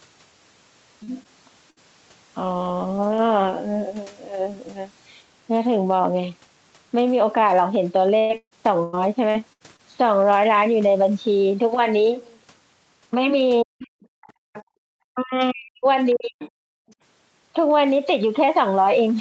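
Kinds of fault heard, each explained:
short concealed packet loss: Brief runs of packets failed to reach the decoder in time, and the receiver bridged each hole by extending the preceding sound before blending back into the real signal. Here about 40 ms goes missing around 1.03 s and about 20 ms at 1.23 s. Each shows up as a quick smear or tiny wobble in the speech, with whatever fell inside the gap simply absent.
burst of packet loss: A longer unbroken stretch of packets was lost or arrived too late to play, so the concealment had to run on and fade rather than just patch a sliver. Between 1.70 and 1.78 s about 60 ms of speech is gone. It is heard as a short held buzz or fading hiss that stands in for the lost material, after which the speech picks up further along.
repeated packet loss (robotic sound): Packets kept dropping out over one stretch, so concealment fired again and again before the stream could recover. 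From 8.18 to 9.81 s there are seven gaps totalling half a second of lost audio, the longest 138 ms, with about a third of that span synthesised. The speech turns choppy, with pieces missing.
speech suppressed in double talk: The speech dips sharply, by roughly 40 dB at its deepest, over 13.63 to 13.93 s and again for about a second within 15.13 to 16.43 s. This is likely the echo canceller failing to tell the talker apart from loudspeaker echo while both sides spoke, and clamping down on everything. The talker's own speech thins out or drops away in pieces during those spans.
other side's voice leaking through: A second, fainter voice is audible from 14.21 to 14.63 s at roughly 20 dB below the main speech, and more faintly, near 35 dB down, around 16.11 to 16.45 s and briefly at 16.88 s. The likely cause is loudspeaker playback reaching the microphone and only partly cancelled.
background gated by the echo canceller: While the far end was playing, the canceller pulled the microphone down hard instead of subtracting just the echo. 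The room sound behind the speech collapses by about 40 dB from 14.32 to 14.85 s and again briefly from 16.71 to 16.88 s. The ambience drops into near silence for those moments, then snaps back once the canceller releases.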